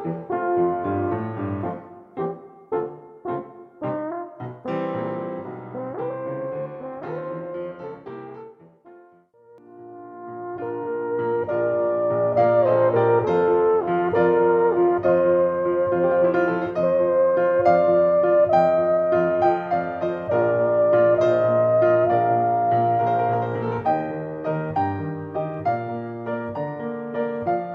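The signal carries no audible technical faults at any point in the clip.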